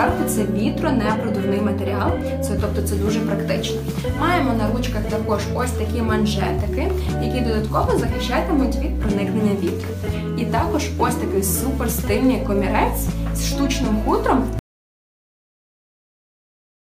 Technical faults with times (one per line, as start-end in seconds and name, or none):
14.59-16.98 audio dropout to silence